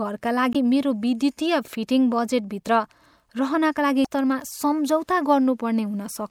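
Damaged data in a compressed stream hits this speech recording at 0.52 to 0.56 s and 4.02 to 4.06 s: corrupted bytes make the decoder misread those frames and lose sync while hunting the next header, leaving two brief glitches of about 40 ms each.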